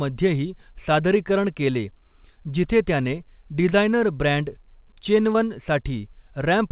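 Speech heard through a narrowband call path with nothing above 4 kHz, which fits G.711 A-law, has two short concealed packet losses. The first is at 3.70–3.73 s, just after "जिथे त्याने", and the second at 5.33–5.36 s. At each, roughly 20 ms of audio never arrived, and the receiver stretched the preceding sound to cover the gap. The result is a brief smeared wobble rather than silence or a sharp click, which tells it apart from a plain dropout or digital glitch.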